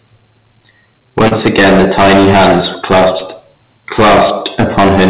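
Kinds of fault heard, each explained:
Hard clipping: A harsh, gritty fuzz sits on every loud stretch of the speech from start to finish. The signal was driven about 20 dB beyond what the stage could pass, so around a fifth of the waveform is cut flat, and those squared peaks spray added harmonics across the call's band, which stops at 4 kHz.
Short concealed packet loss: From 1.28 to 1.34 s the speech briefly smears into a short wobble. About 30 ms of audio missed the decoder, and the receiver covered 28 ms of that gap by continuing the preceding sound before blending back into the real signal.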